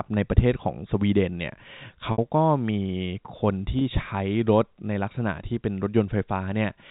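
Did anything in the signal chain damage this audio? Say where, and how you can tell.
Yes, in the network. Packet loss with pitch repetition occurs twice. At 2.12 s, 60 ms goes missing: a buzzy held tone fades away. At 3.79 s, a 20 ms loss sounds like a brief held note. The receiver repeated the last pitch period to fill the missing packets.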